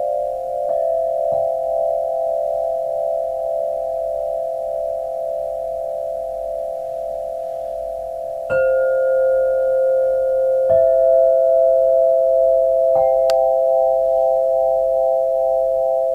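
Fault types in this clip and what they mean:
No faults can be heard anywhere in this audio.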